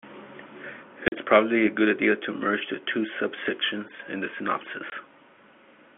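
Packet loss filled with silence punches gaps into this telephone-band speech at 1.08–1.12 s and 4.90–4.92 s; the 40 ms and 20 ms holes fit 20 ms packets.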